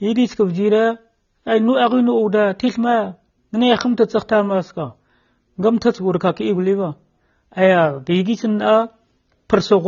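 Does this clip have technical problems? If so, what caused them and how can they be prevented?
Yes. The whole clip shows AAC compression damage. Nothing is present above 7 kHz, so the speech sounds dull, and sibilants have a smeared, fizzy texture. This likely comes from AAC-LC at a low bitrate, which fits about 24 kbps. Encoding at a higher bitrate would prevent it.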